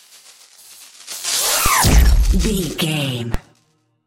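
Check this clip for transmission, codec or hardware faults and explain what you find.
Two DC steps stand out, at 1.66 s and 3.34 s. At each point the waveform's zero line jumps by about -5 dBFS, as a converter recalibrating or an offset input switching in would cause, then relaxes away through a 20 Hz high-pass. Each is heard as a low thump, and the sound carries on unchanged, with no gap or dropout.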